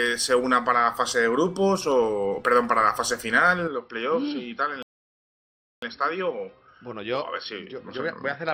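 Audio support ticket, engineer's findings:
Sound turns dull and slightly quieter from 3.68 s onward, faint new background noise, no gap. Likely an input switched to a poorer, narrower-band device.

Audio cuts to silence 4.83–5.82 s, about 1 s, then resumes. Likely a playback stall: the player was starved of data or blocked until recovery.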